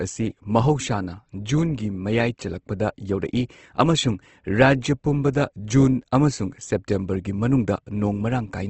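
Throughout, likely Opus compression in its CELT mode at a starved bitrate, fitting about 16 kbps, leaves the speech plainly grainy and rough, with nothing above 8.2 kHz.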